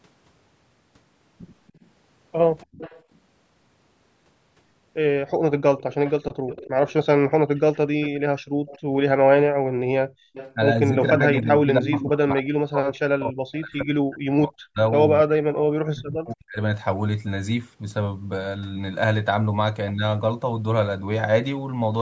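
From 1.68 to 3.18 s a faint delayed copy of the speech trails behind it, about 285 ms late and roughly 20 dB down. This is echo leak. The far end's echo canceller likely failed to remove its loudspeaker sound, so some returned.

At 2.66 to 2.78 s the room background ducks by about 35 dB for roughly a tenth of a second. This is background gated by the echo canceller. It clamped the microphone while its loudspeaker played.

The same 285 ms echo returns from 5.59 to 8.8 s, again roughly 20 dB down. From 8.41 to 10.34 s the background is gated again, dropping by about 40 dB for well over half a second in total.

From 10.34 to 12.04 s the echo leak is stronger, roughly 15 dB below the speech. From 10.55 to 16.57 s both sides talk at once, and the speech itself dips and breaks up. The deepest cuts reach roughly 40 dB, totalling around five seconds. This is speech suppressed in double talk. The canceller likely could not tell the local talker from the echo, so it turned both down. 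A weaker echo, roughly 25 dB down, also sits within this stretch, from 14.98 to 16.07 s.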